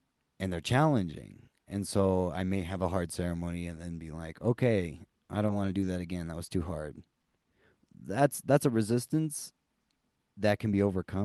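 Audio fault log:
5.80–5.86 s, 7.21–7.25 s, 7.42–7.46 s: short concealed packet loss, after "want to", after "was too hard" and just after that. Each time about 20 ms never arrived, so the receiver carried the last sound forward and blended back. The brief smear or wobble replaces audio that is actually missing, which a stall does not do.
6.45–6.49 s: short stall from a late packet, just before "too hard". One packet came late and the jitter buffer ran dry, so the receiver stretched the last sound by about 20 ms and then resumed from the same place. Nothing is lost, but a sound is held too long with a faint buzz or dip, and everything after it lands 20 ms later.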